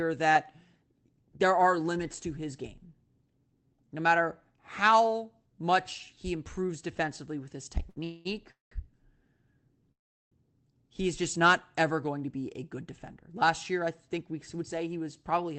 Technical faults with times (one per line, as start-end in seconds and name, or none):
7.89-7.98 short stall from a late packet
8.04-8.73 call audio freeze
9.92-10.33 call audio freeze
14.08-15.58 jitter buffer speed-up